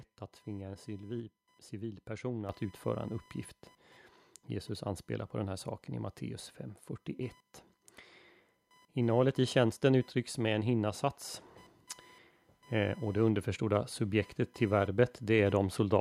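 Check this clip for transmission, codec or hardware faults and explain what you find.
Two hardware-side faults are present: constant computer activity noise, and a single step in microphone gain.

Computer activity noise runs through the whole clip. Processor, graphics or mouse load shifts the ground shared with the audio circuit, adding a buzzing, chirping pulse train of around 1 kHz, roughly 35 dB below the speech, that follows machine activity rather than the talking.

The microphone volume stepped up at 2.49 s. The call software judged the input too quiet and raised the device's input gain in one jump of about 7 dB, so speech and background noise abruptly get louder together.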